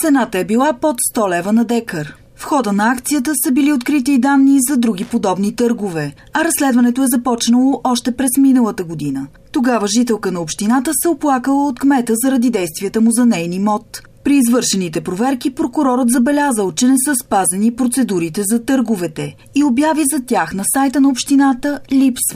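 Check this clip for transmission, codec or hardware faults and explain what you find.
One hardware fault. From 5.02 to 5.13 s, a loose connector crackle: an intermittent contact chops the signal into an irregular scratchy burst.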